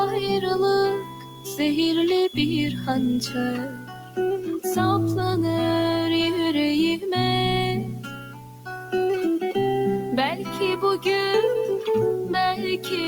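A steady, even hiss runs under the whole clip, sitting roughly 25 dB below the signal and bringing no distortion with it. That is low bit depth with dither: the audio has been rounded to very few levels, which fits a 6-bit signal, and dither added before the rounding has turned the quantisation error into constant white noise instead of grainy, signal-dependent distortion. From the start to 3.44 s a thin, steady whistle at 3.4 kHz sits about 15 dB under the sound, swelling and fading slowly in level without building up. This is most likely a feedback whistle, where the loudspeaker-to-microphone loop is held just at the point of feedback so that a single frequency rings on without running away. A noise suppressor designed for speech has also been left running on this non-speech audio, so the noise suppressor is applied to music or sounds it was not built for. It reads sustained and decaying material as noise and pulls it down while onsets pass through, making the level pump and thin by around 10 dB across the clip. 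In five places the sound is cut by the noise suppressor more deeply than the surrounding material. The level sinks or tails are clipped short at 0.98 to 1.59 s (about 10 dB), 3.68 to 4.18 s (about 10 dB), 7.89 to 8.93 s (about 11 dB), 10.39 to 10.58 s (about 5 dB) and 12.77 to 12.92 s (about 8 dB).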